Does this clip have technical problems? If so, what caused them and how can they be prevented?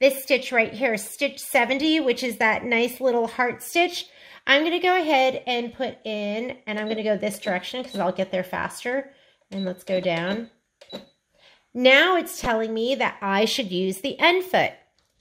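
Yes. From 12.44 to 12.50 s there is a short burst of DAB burbling over the sound. Weak reception let bit errors of roughly a few tenths of a percent slip past the error correction into the MP2 data. Corrupted samples then put short blips of noise into individual sub-bands, a pattern consistent with about four frames being hit. Prevention is better reception margin, through a stronger signal, a better antenna or a receiver with better muting of corrupted frames.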